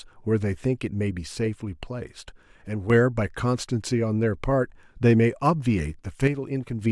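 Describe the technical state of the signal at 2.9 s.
The speech level sags abruptly by about 6 dB from 2.67 s and recovers right at 2.90 s, sounding quieter for that brief stretch. The likely cause is one channel drops out, leaving the mono sum carrying only the surviving channel's share.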